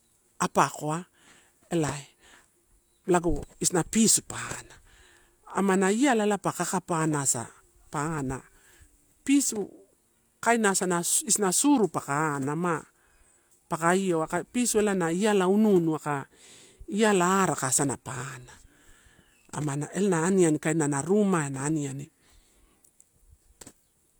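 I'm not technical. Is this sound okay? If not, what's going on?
Yes, nothing stood out as a problem when listening to this recording.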